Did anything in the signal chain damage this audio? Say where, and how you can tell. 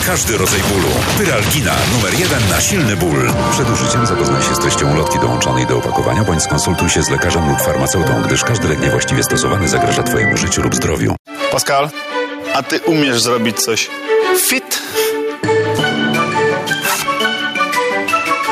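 Yes, gain pumping runs throughout, with the level swinging by around 10 dB as the gain clamps down on each loud sound and recovers afterwards. The waveform envelope looks squashed. The likely cause is input gain set far too high, with a fast limiter or compressor acting on it.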